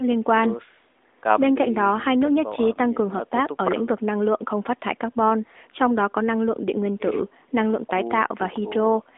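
No faults detected; the sound is confined to a narrow telephone band with nothing above about 3.8 kHz, which fits a narrowband mobile codec such as AMR-NB working as designed.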